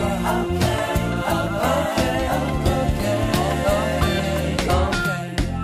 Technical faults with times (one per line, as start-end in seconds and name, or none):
none